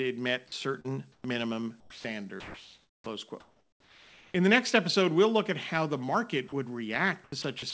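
At 0.48 s, and again from 1.80 to 2.04 s, 2.40 to 3.06 s and 3.40 to 4.34 s, parts of the speech vanish into steady hiss. The longest gap is nearly a second. A fifth dropout comes at 6.48 s, just after "at how the market". This is sound dropped by the voice detector: the sender likely judged quiet speech to be background, stopped transmitting, and comfort noise filled the gaps.

From 0.80 to 0.86 s there is a brief smear. This is short concealed packet loss: about 40 ms of audio arrived too late, and the decoder extended the preceding sound to cover the hole.

Between 1.12 and 1.24 s the real background gives way to flat, featureless noise about 1 dB quieter. This is comfort noise in place of the background, likely inserted during a discontinuous-transmission pause.

From 7.24 s to the end the speech turns choppy. This is sound chopped by the voice detector, likely caused by transmission repeatedly switching on and off, with about 0.18 s replaced in total. 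Throughout the clip nothing is heard above 8 kHz, which fits a wideband call codec.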